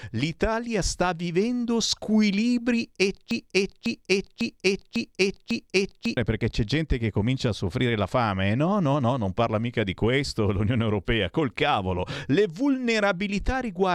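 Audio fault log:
3.31–6.17 s, broken-record loop: right after "sta vivendo squilibri", a 0.55 s fragment of speech plays five times back to back, identical on every pass, before the audio picks up again at "perché c'è gente che". The stream likely stalled and kept resending the last chunk it held, so the sound meant for those seconds is lost. On a spectrogram the same 0.55 s block of harmonics repeats like tiles, and the waveform shows one envelope copied end to end.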